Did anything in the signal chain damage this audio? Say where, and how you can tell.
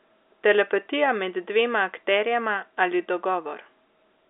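No, nothing in the chain has harmed this speech. It has the sound of an ordinary fixed-line telephone path using G.711 A-law coding: the line band runs from about 300 Hz to 3.6 kHz with nothing above 3.7 kHz, which fits a standard 64 kbps channel, and any coding noise is faint at most.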